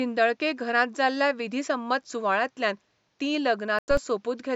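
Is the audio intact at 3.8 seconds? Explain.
No. From 3.79 to 3.97 s a corrupt frame was muted: the decoder rejected damaged compressed data, likely two frames, leaving an abrupt 0.19 s silent hole.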